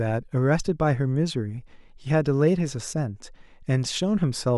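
A short recording of speech, with no technical faults to be heard anywhere in it. Nothing in the signal calls for a time, a cause or a fix.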